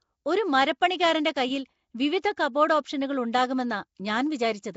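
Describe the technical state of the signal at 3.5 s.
At 3.5 s the speech has a rough, hissy halo and a smeared, underwater quality, as it does throughout the clip, with nothing above 7.7 kHz. This is likely Nellymoser compression, at a rate that fits about 32 kbps. Starved bands get no bits and are refilled with noise.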